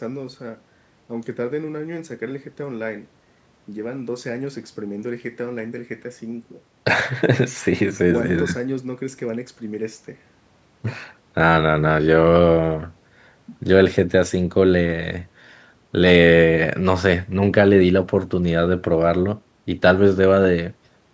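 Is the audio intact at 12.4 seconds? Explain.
Yes, the speech at 12.4 seconds is intact, with no dropout, click or distortion, only the ordinary call microphone processing, which limits the sound to below 8 kHz.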